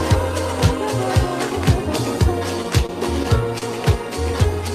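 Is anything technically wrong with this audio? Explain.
Yes. Between 2.63 and 3.64 s there are repeated stalls (stutter): packets arrived late, so the jitter buffer ran dry four times and the receiver stretched the last sound to cover each wait, about 83 ms in all, longest 34 ms. Nothing is lost, but the audio drags and hiccups.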